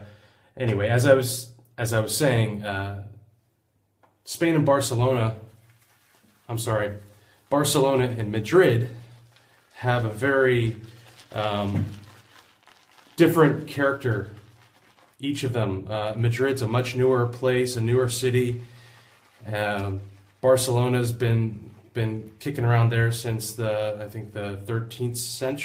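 No technical faults can be heard anywhere in this recording.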